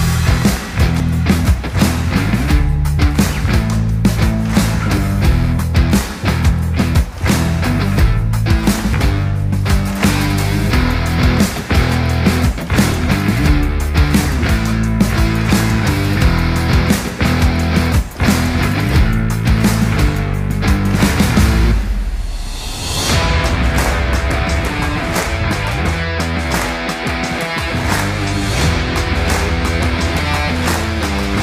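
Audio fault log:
1.00, 4.97, 6.96, 8.94 and 12.92 s: overlap between stream segments. You get tiny clicks or skips where 6 to 11 ms of sound drops out. Neighbouring 2-second segments have overlapping timestamps, so the player trims audio that wasn't actually doubled and the waveform jumps.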